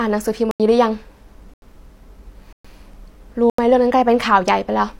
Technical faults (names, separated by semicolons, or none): block of digital silence